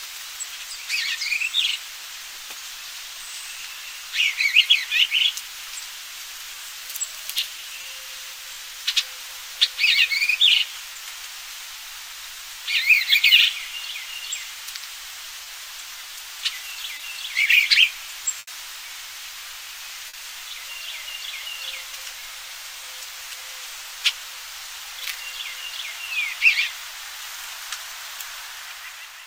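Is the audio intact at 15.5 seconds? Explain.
No. Just before that point, from 15.43 to 15.47 s, there is short concealed packet loss. About 20 ms of audio arrived too late to decode. The receiver extended the preceding sound, as pitch or as shaped noise, then merged back. This leaves a brief smear or wobble.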